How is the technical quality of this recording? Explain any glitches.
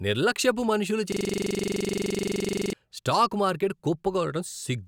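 The recording has one serious glitch. From 1.12 to 2.73 s, a system hang loop repeats a 42.67 ms slice dozens of times, which fits a 2048-sample buffer. The hardware kept replaying that frozen ring buffer, producing a rasping 23.4 Hz buzz. Unlike ordinary stutter, every repeat is identical.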